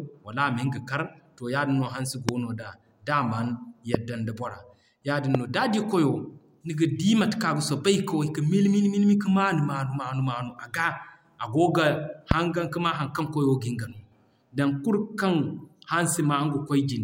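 Single loud pops, about 20 dB above the speech, strike at 2.29, 3.94, 5.35 (before "no d'a di") and 12.31 s (before "hangan ka maa"), each about 22 ms long. They are likely stray voltage pulses. Unlike dropouts, the speech continues underneath.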